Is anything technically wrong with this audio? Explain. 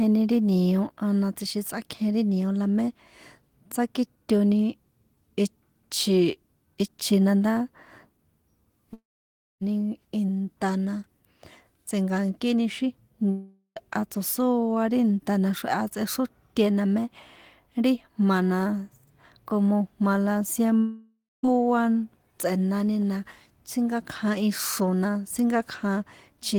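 Yes. There are three gaps, at 8.93–9.63 s (just before "inta na"), 13.31–13.78 s (before "tso̱sóa ri") and 20.78–21.47 s. Each sounds like a long network dropout, likely: the last sound smears into a fading buzz, then goes quiet, and the audio resumes with about 0.46–0.68 s simply gone.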